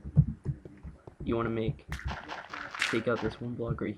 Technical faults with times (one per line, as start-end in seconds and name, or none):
none